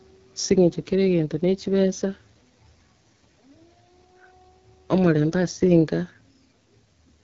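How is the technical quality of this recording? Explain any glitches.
The technical quality is limited by heavy codec coding throughout. AMR wideband (HD Voice) codec damage is plainly audible for the whole clip: the speech sounds rough and raspy, with no content above about 7.4 kHz. The band up to 6.4 kHz is rebuilt from a pulse-excited vocal-tract model, and the top band is synthetic shaped noise. The coarse quality points to one of the lowest AMR-WB rates, around 8.85 kbit/s.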